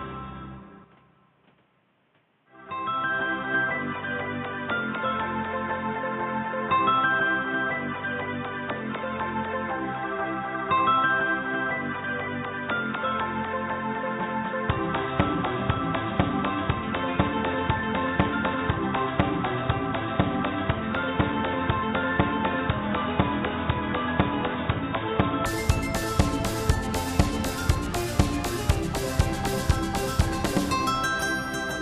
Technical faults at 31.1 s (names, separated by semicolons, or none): none